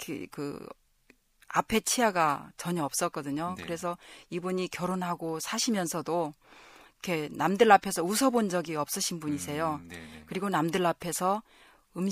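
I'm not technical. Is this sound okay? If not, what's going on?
Yes, nothing wrong can be heard in this recording.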